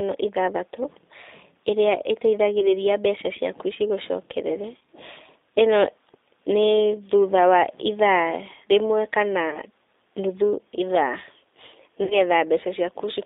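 The speech sounds narrow, slightly rough and synthetic throughout, confined to a telephone band of roughly 300 Hz to 3.7 kHz with nothing audible above that. This is plainly audible G.729 codec damage: the voice is rebuilt from a vocal tract filter, a pitch predictor and a few pulses per frame rather than from the waveform, and the character fits the 8 kbit/s G.729A variant. Four short glitches interrupt it, where the voice is stretched into a buzzy tone or coloured noise that fades and stays weak or distorted for a moment afterwards: 2.60 to 2.74 s, 4.77 to 4.87 s, 9.50 to 9.59 s, and 12.04 to 12.22 s. These are VoIP packet loss concealed by the speech codec. The decoder filled each gap by extending its last pitch and filter settings at falling gain, covering about 20 ms, 60 ms, 30 ms and 60 ms of lost audio respectively. At 4.77 s the losses were scattered over about 100 ms, with a longest run of 40 ms. 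Because each frame builds on the one before, the distortion lingers past the actual gap.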